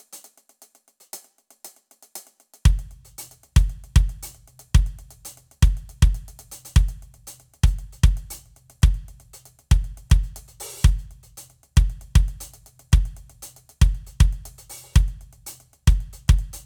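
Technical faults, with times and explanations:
No technical faults can be heard in this music.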